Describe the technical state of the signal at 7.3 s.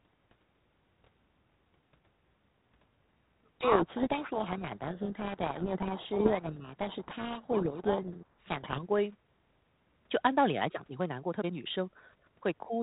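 At 7.3 s the speech sits inside a codec payload misread from 3.60 to 8.81 s: G.726 code words decoded in reversed bit order bury it in harsh distortion.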